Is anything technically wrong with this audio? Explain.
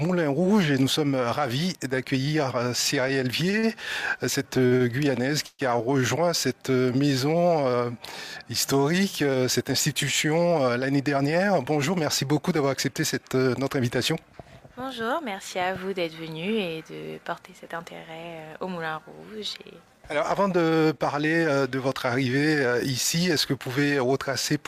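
Yes. From 3.01 to 5.62 s the audio drags and stutters: repeated stalls, seven brief holds up to 126 ms, where late packets emptied the jitter buffer and the last sound was stretched. At 10.67–12.06 s and 16.10–16.82 s the sound briefly hurries at unchanged pitch, running about 9–10% fast. This is jitter buffer speed-up, trimming pitch-period slices to shed excess buffered delay, roughly 150 ms and 70 ms.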